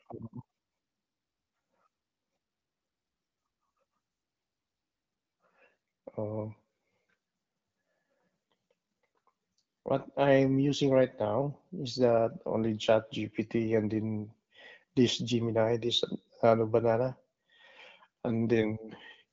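Right at the tail end of the speech, from 18.50 to 18.52 s, there's a single loud pop, a sharp little click-thump that peaks a few dB above the talking and is gone in about 20 ms while the speech carries straight on beneath it. Likely cause is a stray voltage pulse from a switch, a static discharge or a driver glitch. It sits on top of the narrow HD Voice sound, whose top end stops around 7.5 kHz, which fits the AMR wideband (HD Voice) codec at a fairly high rate.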